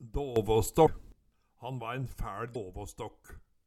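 At 0.36 s the whole signal, background noise included, leaps up by about 12 dB from one instant to the next, with no fade, and stays raised until 1.12 s, where it drops back just as abruptly. That hard step is a sudden gain jump, likely a digital gain setting applied without any ramp, so the level changes between adjacent samples instead of easing across.

Inside that louder stretch, at 0.85 s, a brief glitch lasting about 26 ms breaks in and the sound skips ahead. The same kind of event recurs at 2.53 s, about 28 ms long. Both are the mark of a broken MP3 bit reservoir: frames were likely lost from the stream, so the next frame reached back for borrowed data and decoded bytes belonging to another frame. The glitch lengths fit roughly one 24 ms frame.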